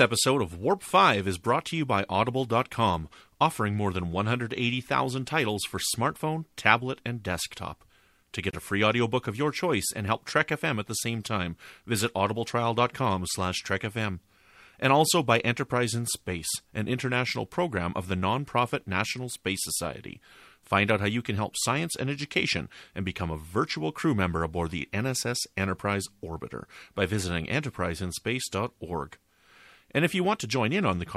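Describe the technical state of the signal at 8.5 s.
At 8.5 s there's a gap at a join of encoded pieces: the speech drops out from about 8.51 to 8.53 s, roughly 25 ms of silence, then picks up right where it left off. That's what you get when two separately encoded chunks are butted together without trimming, so the encoder's start-up delay and last-frame padding both stay in. The codec smears the edges of the hole.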